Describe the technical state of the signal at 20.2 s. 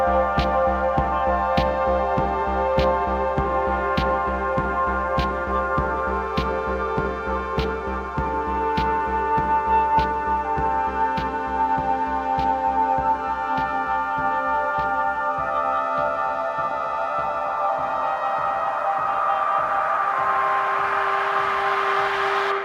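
At 20.2 s the signal is intact, with no audible fault at that point.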